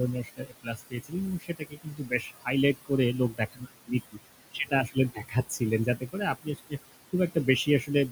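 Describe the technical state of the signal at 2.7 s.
At 2.7 s the sound falls inside a stretch of speech cut by the noise suppressor, running from 0.24 to 4.19 s. The suppressor mistakes quieter parts of the speech for background and pulls them down with it, by up to about 21 dB at the deepest, about two seconds in all across this span. Soft consonants and word tails come out swallowed or faint. Unlike a dropout or gate, the sound never goes fully silent. It fades under the same gain the background receives.

Running underneath at this moment are noise suppressor artifacts, present across the whole clip. The room noise, which sits about 13 dB below the speech, is lowered by about 19 dB frame by frame, band by band. It dips between syllables and rises beneath them. That frame-by-frame movement sets it apart from plain hiss or a steady codec smear.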